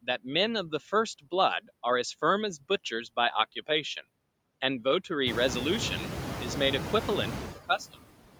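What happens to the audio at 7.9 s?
Speech cut by the noise suppressor runs from 7.55 to 7.96 s. The room noise is now only about 9 dB below the speech, and the suppressor takes parts of the speech for noise and turns them down by up to about 18 dB, so roughly 150 ms of soft sounds come out swallowed and faint. Noise suppressor artifacts are also present there, as throughout the clip. Frame by frame, the suppressor pulls the bands it judges to be steady noise down by about 19 dB, so the noise sinks between the words and rises under them.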